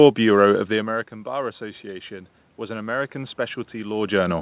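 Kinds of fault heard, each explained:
Automatic gain rising: the automatic gain control reacts to a drop of about 17 dB at its input and slowly pushes its gain back up, starting near 0.7 s and still climbing when the clip ends. The speech therefore swells gradually over several seconds instead of holding steady, and the room noise rises along with it, so the background swells together with the narrowband speech.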